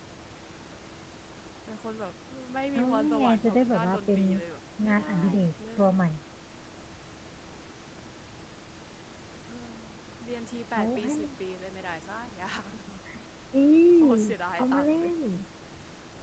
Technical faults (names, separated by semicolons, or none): none